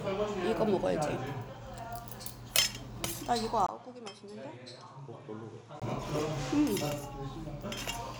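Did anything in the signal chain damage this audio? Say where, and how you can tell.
Yes. At the input stage, the recording likely switched to a poorer input device at 3.67 s, after a 20 ms silence. Until 5.82 s the sound drops about 10 dB, loses everything above 11.1 kHz, and carries a new noise floor roughly 55 dB down.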